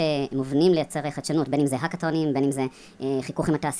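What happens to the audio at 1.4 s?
At 1.4 s, as across the whole clip, the speech sounds high and hurried, running about 1.38 times too fast and roughly 5.5 semitones sharp. This is a wrong sample rate fault: the samples play faster than recorded, with no conversion, which fits 16 kHz audio played at 22 kHz.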